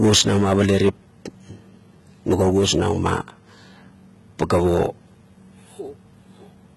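Throughout the speech, s sounds turn gritty and lispy over a bright but synthetic top end, likely HE-AAC compression copying lower bands upward, which fits roughly 16 kbps.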